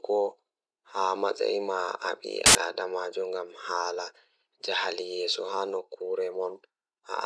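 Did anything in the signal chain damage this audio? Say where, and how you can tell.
Yes. At the storage and playback stage, file tags were played as audio: an embedded cover picture was decoded as samples. Its compressed bytes come out as very loud white noise, a hard-edged burst of static cutting through the speech from 2.46 to 2.55 s.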